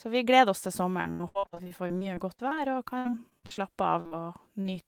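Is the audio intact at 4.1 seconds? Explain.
No. Short concealed packet loss spans 4.01–4.13 s, two back-to-back 40 ms gaps filled by extending the preceding sound, giving a brief smear. On a spectrogram, harmonics stretch unnaturally flat before resuming.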